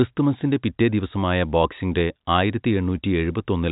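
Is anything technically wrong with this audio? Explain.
No, nothing in this speech is technically wrong. It carries ordinary G.711 telephone coding, so nothing above about 3.8 kHz comes through, which fits a 64 kbps mu-law phone line.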